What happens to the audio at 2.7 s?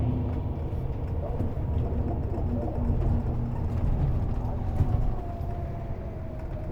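There's a brief dropout from about 2.73 to 2.75 s, roughly 20 ms of lost LE Audio frames, which fits two LC3 frames going missing. The decoder papers over the gap by reusing the previous spectrum with scrambled signs, so that instant comes out as a short noisy smear.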